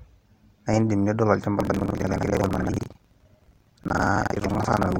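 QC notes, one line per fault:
1.58 s to end, buffer tearing: a rattling, robotic buzz at 21.5 Hz sets in on the speech and persists. The software filling the playback ring buffer and the hardware draining it have drifted out of step, so they cross inside each period. Roughly two fifths of every buffer replays audio from about a tenth of a second earlier, hard-spliced at both edges. The repeat rate fits a 2048-sample buffer.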